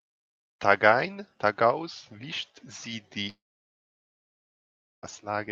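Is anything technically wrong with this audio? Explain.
Yes. Long network dropout, 3.29 to 5.05 s, just after "tagaus wischt sie": about 1.74 s of audio likely never reached the receiver. The last sound is stretched into a brief fading buzz, then near silence holds for roughly 1.7 s before speech resumes, that stretch lost.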